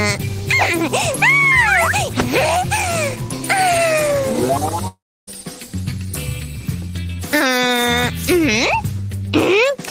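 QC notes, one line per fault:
4.87–5.29 s, long network dropout: sound stretches into a fading buzz, then 0.3 s of silence, resuming further on with material skipped, likely lost packets, not a brief glitch.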